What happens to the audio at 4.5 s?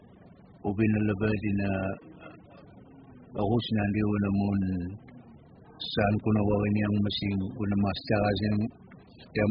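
At 4.5 s you're hearing the same damage that runs through the whole clip, most likely AAC compression. Nothing comes through above about 5.1 kHz, so the speech sounds dull and muffled, with a warbly, fizzy smear on sustained sounds and sibilants. That fits AAC-LC squeezed to something like 8 kbps, where the encoder drops the top band entirely and quantises what's left so coarsely that gaps and substitute noise show up in the spectrum.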